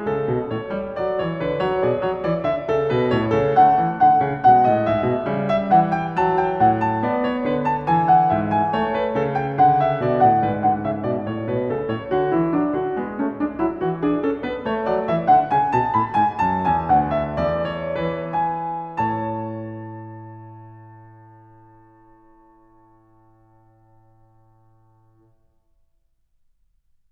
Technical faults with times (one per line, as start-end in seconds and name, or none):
none